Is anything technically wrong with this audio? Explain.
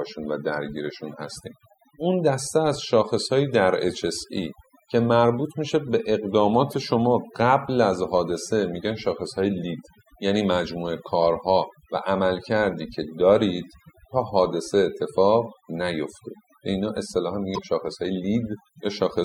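Yes, there are two problems.

Overdone noise removal runs through the whole clip. A noise reduction stage was set far too aggressively, so any frequency band sitting close to its noise estimate gets pushed down hard or switched off entirely, and the softer parts of the voice are cut along with the noise. The background drops and breaks up into twinkling specks.

Damaged data in a compressed stream appears twice, at 6.71 to 6.74 s and at 17.54 to 17.59 s, each lasting only a few tens of milliseconds. At those points the encoded stream is corrupt, so the decoder misreads the affected frames, loses sync and has to hunt for the next valid frame header. Each event is heard as a brief chirp or blip.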